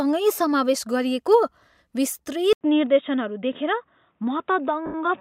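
At 2.53 s the sound goes silent for about 80 ms and comes back dull and boxy, with nothing above 3.8 kHz and a faint new noise floor. The level barely shifts. An input switched to a poorer device is the likely cause. Unlike a codec's gradual top cut, the change is abrupt and stays to the end.

From 4.86 to 4.94 s, an 80 ms stretch turns into a noisy smear where tones lose their pitch. This fits about eight lost LE Audio frames that the decoder covered by repeating the last spectrum with random signs. A plain dropout would go silent instead of smearing.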